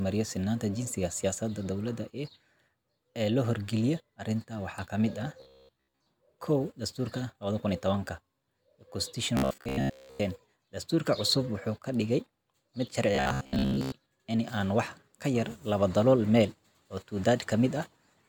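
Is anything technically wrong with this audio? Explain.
Yes. Robotic sound from repeated short buffers appears three times, at 5.40 to 6.06 s, 9.37 to 10.21 s and 13.15 to 13.93 s. The speech turns into a rigid, metallic buzz at 66.7 Hz that still roughly tracks the words. This is likely audio arriving too seldom, with the playback looping a segment of about 15 ms to fill the gaps, so roughly 70 percent of the real speech in those stretches goes missing.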